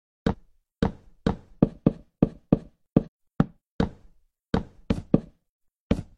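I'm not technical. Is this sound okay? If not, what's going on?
No. At 0.28–0.35 s, 3.02–3.08 s and 5.44 s the sound jumps ahead: compressed frames skipped. Chunks of roughly 46 ms each went unplayed, losing about a tenth to a third of a second. Unlike a dropout, there's no silence, just an abrupt jump ahead.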